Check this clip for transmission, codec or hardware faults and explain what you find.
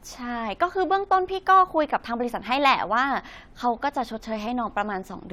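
No technical faults can be heard: the speech signal stays continuous and intact throughout, with nothing in it that points to a problem in the chain that carried or recorded it.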